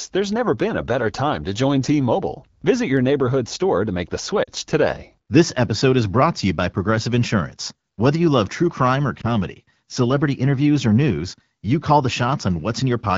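Speech coded with AMR wideband (HD Voice), light codec texture consistent with its 12.65 kbit/s mode, has two brief runs of lost AMR speech frames. At 4.44 to 4.50 s the decoder bridges roughly 40 ms, which fits two 20 ms frames failing their checksum, and at 9.21 s a single 20 ms gap appears. In each case the decoder repeats the last good pitch and vocal tract settings at reduced gain. What sets this apart from a plain dropout is that there is no hard silence or click. At 4.44 s the sound fades to near silence within the two frames, and at 9.21 s you hear a brief dip or warble, then weak or rough onsets as decoding resumes.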